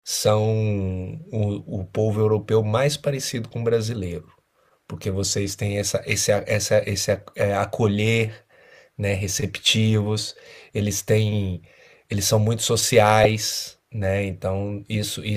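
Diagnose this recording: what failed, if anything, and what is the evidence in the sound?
Lost LE Audio frames at 13.24 s, at the codec and wireless link stage. For about 15 ms the speech loses its clear tonal structure and turns into a brief noisy smear, which fits two consecutive 7.5 ms LC3 frames failing to arrive over the Bluetooth LE Audio link. To conceal the gap, the LC3 decoder repeated the last good spectrum with randomised signs. That keeps the energy and spectral shape but scrambles the phase, so voiced sound becomes hiss-like for that instant.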